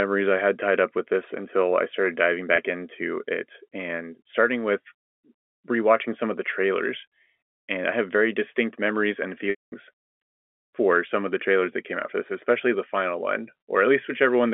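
At 2.56 to 2.58 s, after "until I started diving", packet loss with pitch repetition bridges a single 20 ms packet gap as a brief buzzy hold. At 9.50 to 9.72 s, after "very distinct memories and", about 220 ms is lost, so the repeated pitch period fades to silence before resuming over the band-limited telephone line.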